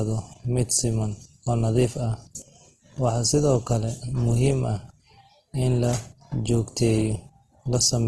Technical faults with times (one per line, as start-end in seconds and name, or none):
0.00-8.07 Opus compression